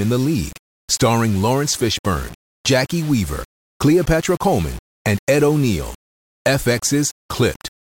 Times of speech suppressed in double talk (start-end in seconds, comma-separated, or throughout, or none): none